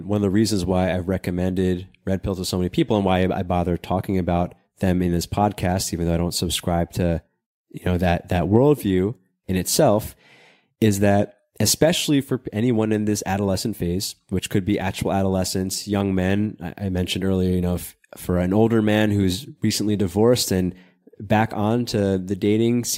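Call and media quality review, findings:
No faults found in this speech recording.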